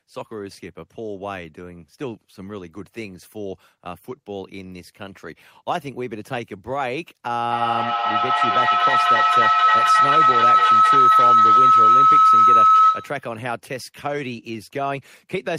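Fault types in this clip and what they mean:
feedback howl: From 7.49 to 13.29 s a shrill tone near 1.5 kHz swells over the speech, the loop repeating roughly every 300 ms, and peaks about 12 dB above it. A microphone hears a loudspeaker on the same call, and each trip round that loop adds gain.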